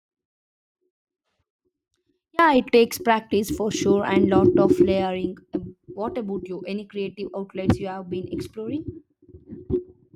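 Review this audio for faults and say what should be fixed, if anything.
The likely cause is that the wanted signal was lost upstream while the path after the break stayed live, producing an audio dropout to a faint residue. The dropout is already under way when the speech clip begins and lasts until 2.39 s. Through that stretch only a faint leak of the sound remains, somewhere around 35 dB below normal level. At 2.39 s the speech returns abruptly, a hard step rather than a fade-in or a natural pause ending. Securing connections and confirming the source is feeding the chain before recording starts would prevent this.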